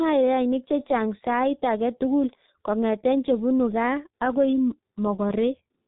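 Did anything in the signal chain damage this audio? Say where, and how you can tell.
Yes, at the codec. The G.723.1 codec leaves nothing above 3.8 kHz throughout, so the speech is muffled and hoarse with smeared consonants, which fits a 6.3 kbit/s frame coder.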